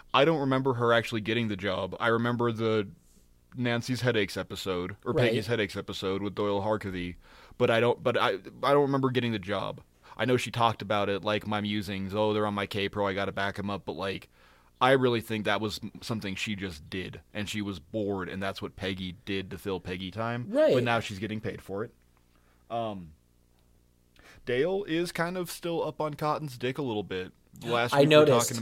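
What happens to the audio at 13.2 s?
A screen or video cable is coupling into the audio path throughout, so at 13.2 s a faint 60 Hz video or display buzz with hash sits roughly 40 dB under the speech.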